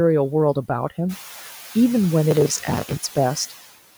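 From the start, noise suppressor artifacts run through the speech. The suppressor pulls down the bands it judges to be steady noise by about 6 dB, so the background dips in the pauses and swells back under the speech. The room noise rises by about 12 dB near 1 s, where it sits about 19 dB below the speech. On a spectrogram the noise floor looks mottled and speckled, with patches switching on and off from frame to frame.

From 2.31 to 2.97 s, processor overload crackle tears across the speech. The processor fell behind and missed its buffer deadlines many times in a row, about thirty times, with buffers of around 10 ms. Each miss replays a scrap of old audio joined with hard edges, and together they make a gritty, crackling burst that stops at 2.97 s. The waveform shows a dense run of abrupt discontinuities and repeated fragments. The spectrogram shows thin vertical broadband streaks packed across that stretch.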